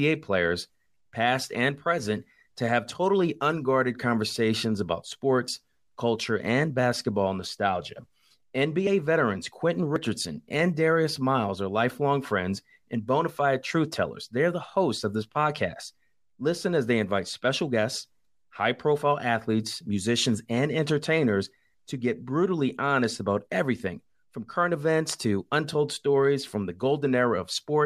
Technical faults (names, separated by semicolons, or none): dropped buffer (overrun)